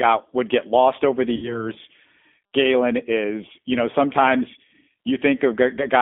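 Throughout, the G.729 codec rebuilds the speech at 8 kbit/s from a few pulses per frame. The band is held to 250 Hz–3.5 kHz. The speech sounds rough and synthetic.

From 1.36 to 1.71 s, VoIP packet loss is concealed by the speech codec. About 60 ms went missing, which fits two lost packets. The decoder stretched earlier sound into a fading buzzy tone or coloured noise, and the speech stays weak or distorted afterwards.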